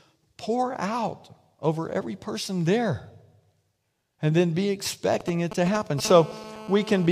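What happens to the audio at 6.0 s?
At 6.0 s the GSM signalling bursts, which began at 5.21 s just after "and then be", end at 6.00 s. A nearby 2G handset is sending short groups of radio bursts, which fits call setup or an incoming message. The audio circuit rectifies them, so the sound carries a galloping dit-dit-dit of brief 217 Hz buzzes, roughly 10 dB below the speech.

At 6.05 s a continuous GSM phone buzz takes over and runs to 7.07 s. The steady form points to the handset now being in an active call, transmitting bursts 217 times a second without a break. The rectified pulses produce a hard, raspy 217 Hz buzz rich in harmonics and unrelated to the speech, at about 15 dB below it.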